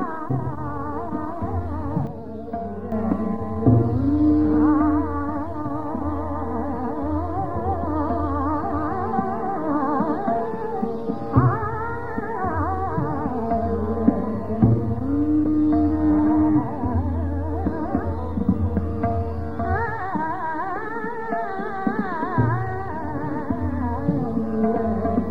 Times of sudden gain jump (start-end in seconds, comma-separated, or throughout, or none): 2.07-2.92